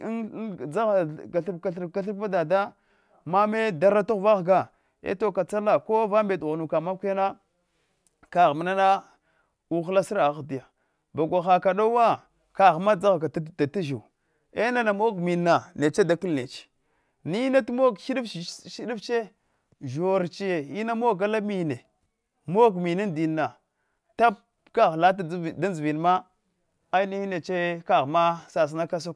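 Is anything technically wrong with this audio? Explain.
No, there are no technical faults to report in this speech recording.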